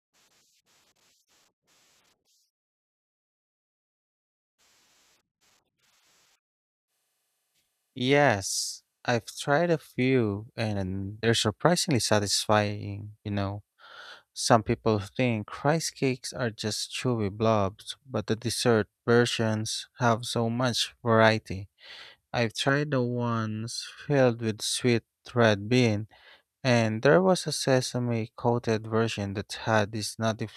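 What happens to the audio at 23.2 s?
Around 23.2 s you're in a stretch of channel delay (comb filtering), running from about 22.69 to 24.10 s, just before "with sweet red bean". One channel lags the other by well under a millisecond, and summing them carves evenly spaced notches from around 700 Hz up, so the speech goes hollow and phasey.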